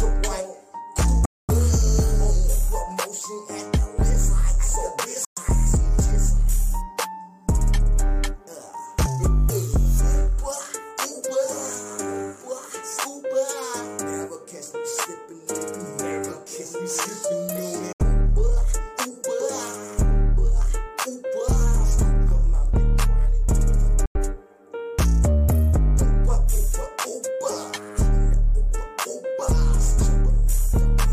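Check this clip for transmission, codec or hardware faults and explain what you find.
There are four gaps that sound like a Bluetooth dropout, at 1.25 to 1.50 s, 5.25 to 5.39 s, 17.93 to 18.01 s and 24.06 to 24.16 s. Packets likely arrived too late and were discarded, so the sound cuts to silence for 70 to 230 ms, then resumes further along.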